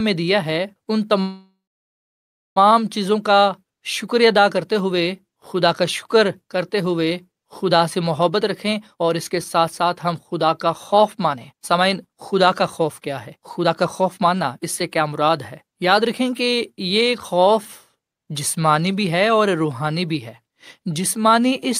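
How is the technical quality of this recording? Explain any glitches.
The recording has two clear glitches, both typical of a packet-based call.

Call audio freeze, 1.21 to 2.58 s: packets were most likely delayed in transit, so the jitter buffer emptied and the receiver had nothing new to play. It stretched the last bit of speech into a fading buzz or hiss, then dead silence for about a second, about 1.35 s of filler in all. When the audio resumes, it picks up exactly where it stopped. Nothing is lost, but the speech now runs 1.35 s late.

Jitter buffer speed-up, 8.29 to 17.42 s: the buffer then held more audio than its target, so the receiver cut out many tiny slices of a pitch period or so each to shrink the backlog. Together the cuts trim about one and a half seconds. The speech plays about 115% fast at unchanged pitch, so it sounds hurried.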